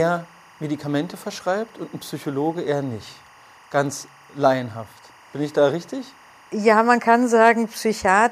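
Timecode bleed runs beneath the speech for the whole clip: a steady chirping warble alternating between roughly 1 and 2 kHz, sitting some 30 dB under the voice. Linear timecode at 23.976 frames per second has leaked in from an adjacent track or cable.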